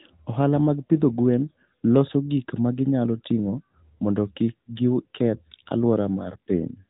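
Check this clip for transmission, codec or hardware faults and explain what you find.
One codec fault runs through the whole speech clip: AMR narrowband mobile codec coding. At 8 kHz sampling, its vocal-tract model rebuilds each 5 ms from a handful of pulses, audibly buzzy and synthetic at a mid-rate mode near 10 kbps. A spectrogram shows a hard ceiling at 3.8 kHz, with empty space above.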